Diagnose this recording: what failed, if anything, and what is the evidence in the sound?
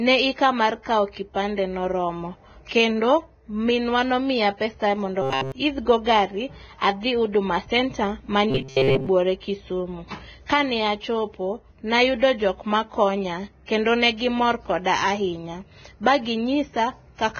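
The codec stage shows heavy damage throughout, most likely from Vorbis compression at a low bitrate near 17 kbps. The speech is hissy and grainy, with smeared consonant onsets. A spectrogram shows a lowered cut-off and a mottled, noisy texture beneath it.

At the buffer stage, robotic sound from repeated short buffers appears from 5.22 to 5.52 s and from 8.50 to 9.07 s, most likely caused by buffer underruns. During the first stretch the output is entirely made of repeats, and during the second most of it is. The same short block of about 7.5 ms loops, imposing a rigid 134 Hz metallic buzz. The waveform shows identical repeating cycles, and a spectrogram shows evenly spaced harmonic lines.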